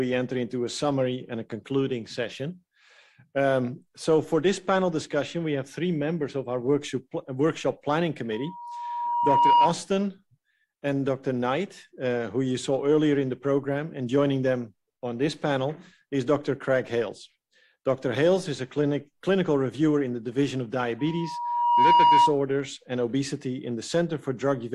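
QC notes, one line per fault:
8.32–9.77 s and 20.99–22.36 s, loudspeaker feedback squeal: a steady 955 Hz tone swells over about a second to roughly 10 dB above the audio, then stops. A microphone is picking up its own loudspeaker, and loop gain above one at 955 Hz lets that tone feed itself.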